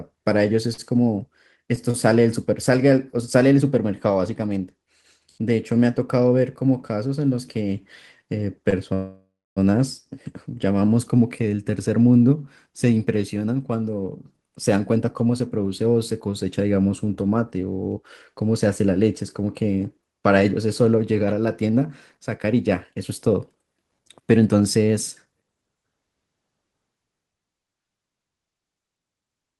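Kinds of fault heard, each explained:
Short stall from a late packet: A late packet emptied the buffer, so the last sound was held about 45, 33 and 20 ms at 0.73, 1.91 and 8.70 s. Nothing was lost.
Call audio freeze: From 8.94 to 9.58 s the sound stretches into a fading buzz, then about 270 ms of silence. Delayed packets likely drained the buffer, and nothing was lost.
Jitter buffer speed-up: Short pitch-period pieces were cut to reduce excess buffering. Speech runs 6% fast at 14.74–15.60 s and 8% fast at 21.62–25.85 s, at unchanged pitch.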